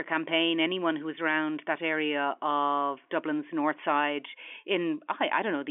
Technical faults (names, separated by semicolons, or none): none